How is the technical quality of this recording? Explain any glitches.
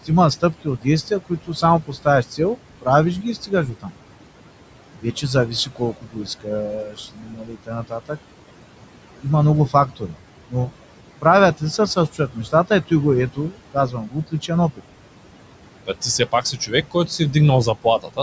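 The recording has audible noise-suppression problems. A call's noise suppressor is working hard against room noise that sits only about 14 dB below the speech, and the same microphone processing leaves nothing above 8 kHz.

Noise suppressor artifacts run through the whole clip. The suppressor estimates which frequency bands hold steady background noise and pulls them down frame by frame, by about 18 dB here. Between phrases the background drops away, then climbs back under each stretch of speech.

Speech cut by the noise suppressor happens in four stretches: 0.05 to 3.94 s, 5.01 to 8.18 s, 9.22 to 14.82 s and 15.85 to 18.19 s. Inside each, the suppressor misreads quieter parts of the speech as noise and turns them down with the background, by up to about 18 dB (about 17 dB in the third stretch). The affected parts add up to roughly a second, two seconds, a second and a half and half a second respectively, and there soft consonants and word endings sound swallowed or faint.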